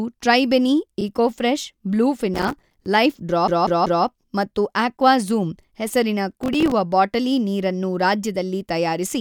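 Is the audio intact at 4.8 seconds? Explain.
Yes, at 4.8 seconds the speech is intact, with no dropout, click, distortion or other fault audible there.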